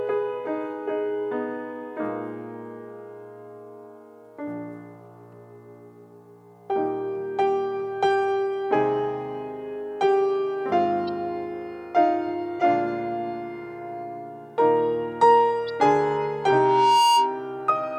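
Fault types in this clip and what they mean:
Corrupt frame decoded: damaged compressed frames played anyway, giving brief misplaced-energy blips at 11.08, 12.60 and 15.67 s, each spanning one or two frames.
Loudspeaker feedback squeal: a 939 Hz loop tone swells over about a second from 16.17 s, reaching about 10 dB above the signal before stopping at 17.45 s.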